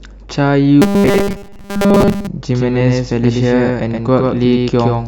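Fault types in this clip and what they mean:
Robotic sound from repeated short buffers: 0.82 to 2.27 s, a metallic 200 Hz buzz, likely one 5 ms buffer replayed repeatedly while the real audio is skipped.
Doubled audio track: from 2.51 s to the end, a somewhat quieter full-band copy starts abruptly and trails about a tenth of a second behind, likely a second, slower capture path.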